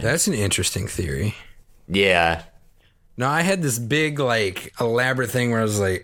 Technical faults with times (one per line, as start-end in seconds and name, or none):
none